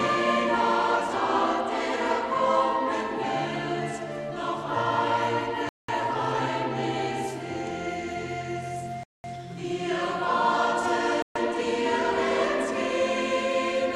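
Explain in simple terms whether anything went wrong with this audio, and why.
Three Bluetooth stalls cut the sound to silence, at 5.69–5.89 s, 9.03–9.24 s and 11.22–11.36 s. Interference likely delayed the data. The headphones ran out and paused.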